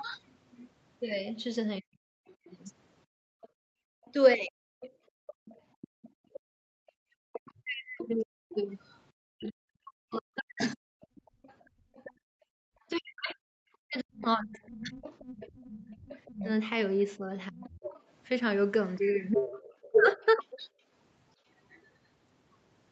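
From 1.8 to 20.67 s, an echo canceller that likely could not tell the talker from the loudspeaker echo during double talk turned both down. The result is speech suppressed in double talk: the voice dips, thins or breaks up for roughly 5 s in total, falling as much as around 40 dB.

From 2.27 to 21.87 s, the other side's voice leaks through, likely because the echo canceller left some of the loudspeaker signal in the microphone. It sits around 15 dB below the talker and comes through as a second voice.

Background gated by the echo canceller occurs from 3.06 to 6.8 s and again from 11.63 to 12.68 s. The canceller clamped the microphone hard while the loudspeaker played, so the room sound drops by about 33 dB and then about 32 dB before returning.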